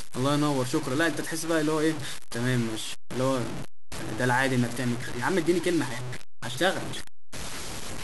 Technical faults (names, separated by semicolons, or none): low bit depth without dither